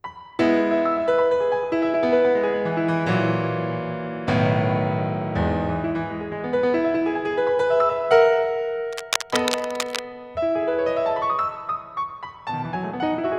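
A burst of cable scratch noise cuts across this music from 8.92 s to 10.00 s, a little over a second of dense, irregular crackling and rustling riding on top of the sound at roughly 5 dB below it. The likely cause is a worn cable, connector or control being moved, so its contact resistance flickers rapidly. On a spectrogram this shows as a ragged, broadband smear of vertical streaks, and the waveform gains jagged, uneven spikes over that stretch.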